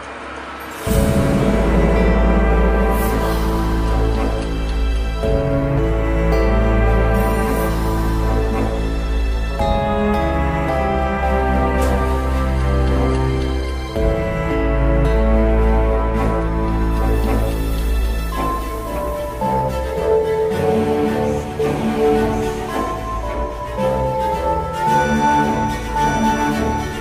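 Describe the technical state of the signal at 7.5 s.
The signal at 7.5 s is intact, with no dropout, distortion, glitch or other fault audible at that point.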